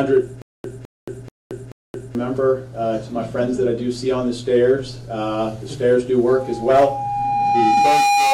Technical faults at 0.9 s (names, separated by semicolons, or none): stutter with silent gaps